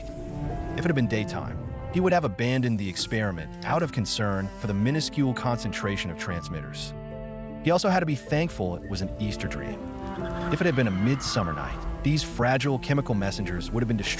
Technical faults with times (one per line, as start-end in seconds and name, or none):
none